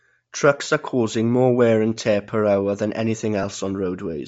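Throughout the speech there is a breathy, grainy edge on the upper frequencies, plainly audible, likely Bluetooth LC3 compression at a low bitrate. The codec zeroes much of the top band and fills it with noise, which gives a hiss-like texture rather than the metallic warble of other codecs. At 0.64 to 0.66 s, lost LE Audio frames leave a brief noisy smear, about 20 ms long, consistent with two 10 ms frames. The decoder repeats the last spectrum with randomised phase, so it sounds smeared rather than cut to silence as a plain dropout would. A shorter smear follows at 3.43 s, just after "tear per hour than", fitting a single lost frame.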